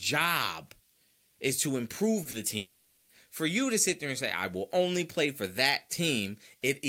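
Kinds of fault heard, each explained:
Short concealed packet loss: two brief smeared wobbles just after "is to", at 2.23 and 2.31 s, where 20 ms gaps were filled by extending the preceding sound.
Long network dropout: a fading buzz or hiss from 2.57 to 3.11 s before "for you to sit", likely from about half a second of audio that never arrived.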